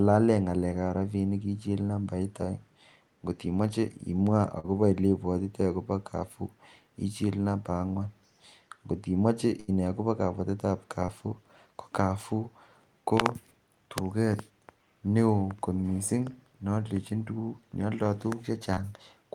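Short concealed packet loss at 4.59 to 4.66 s: about 40 ms of the call arrived too late, so the receiver stretched the preceding speech across the hole, leaving a brief smear. A burst of packet loss follows at 9.60 to 9.70 s, where about 80 ms went missing in a row; the last sound is held and faded before the speech resumes further on. Short concealed packet loss returns at 11.06 to 11.10 s, a 20 ms gap heard as a brief smear, and again at 18.74 to 18.79 s, where about 40 ms is lost and 32 ms is patched with a short wobble.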